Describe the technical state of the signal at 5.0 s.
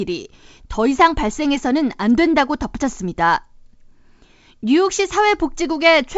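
At 5.0 s the speech is intact, with no fault. It carries only the band-limited character of G.722 wideband telephone coding at 64 kbit/s, which leaves nothing above about 7.7 kHz.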